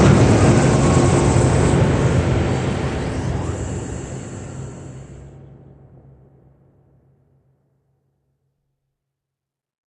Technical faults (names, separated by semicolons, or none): DAB burbling